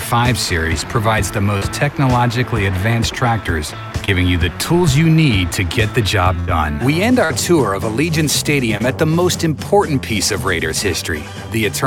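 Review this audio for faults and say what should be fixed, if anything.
Short concealed packet loss occurs four times: 1.57 to 1.63 s, 4.05 to 4.10 s, 7.25 to 7.32 s and 8.78 to 8.82 s. Each time, 20 to 40 ms of audio failed to reach the decoder, and the receiver extended the preceding sound to fill the hole before blending back. Each gap is heard as a brief smear or wobble, not a sustained held tone, which sets it apart from a burst. Adding a jitter buffer with more headroom, or forward error correction, would prevent these losses.

A burst of packet loss occurs from 6.40 to 6.49 s. About 80 ms went missing in a row, and the receiver continued the last sound for roughly 77 ms while fading it. The result is a held buzz or fading hiss, followed by an audible skip where the sound resumes further on. That duration and the jump forward distinguish it from the short dropouts. A more robust network path or packet redundancy would prevent this kind of burst.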